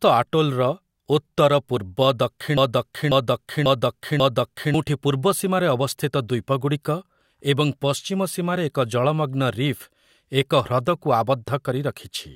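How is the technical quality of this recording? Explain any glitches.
There's one clear glitch in this speech clip: a broken-record loop from 2.58 to 4.74 s. A slice of about 0.54 s plays four times back to back, likely because the player or stream stalled and kept resending its last buffered fragment, so whatever should have played there is simply missing.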